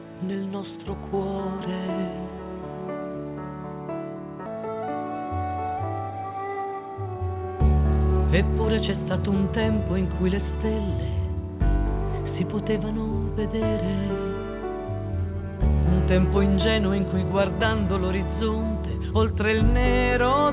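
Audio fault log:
4.46–4.48 s, skip ahead: about a second of sound is simply missing, with no fill, so playback leaps forward and the two sides butt together. On a waveform the envelope changes abruptly at the splice. On a spectrogram, under the 4 kHz ceiling of the call codec, the harmonic pattern breaks off in a hard vertical seam.
4.56–7.43 s, jitter buffer speed-up: after the jump the receiver trims its excess delay by repeatedly cutting out short pitch-period pieces, roughly a third of a second in total. The sound runs at 109% speed with unchanged pitch, so it feels hurried. The spectrogram shows compressed timing with harmonics at the same heights, and the waveform shows tiny periodic splices.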